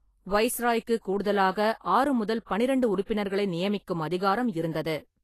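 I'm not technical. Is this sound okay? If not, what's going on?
No. The speech has a hissy, grainy edge from start to finish, with attacks blurred rather than crisp, and nothing above about 14.2 kHz, so the top sparkle is missing. This is plainly audible Vorbis compression, likely from saving the file at a low quality setting. To save space, the encoder describes fine high-pitched detail only roughly, so that detail comes back as a noise-like texture instead of the original sound.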